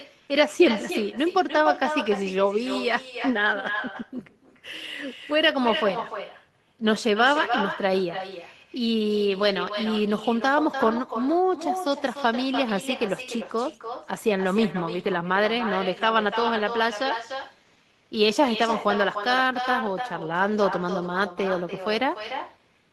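Throughout the clip, echo with no canceller: the far-end loudspeaker leaks into its microphone, returning speech around 300 ms later, about 8 dB quieter and thin.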